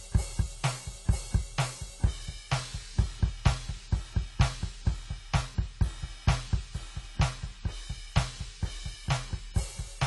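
AAC compression runs throughout the music: nothing sounds above 11.5 kHz, and the dull, warbling smear points to coarse quantisation, likely AAC-LC near 32 kbps.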